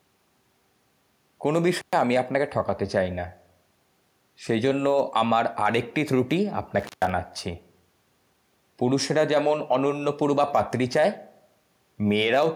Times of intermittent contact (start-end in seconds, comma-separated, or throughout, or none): 1.80-1.93, 6.79-7.09